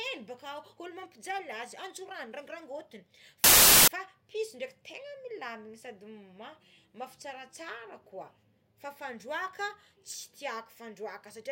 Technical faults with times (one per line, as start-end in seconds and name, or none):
3.44-3.88 file tags played as audio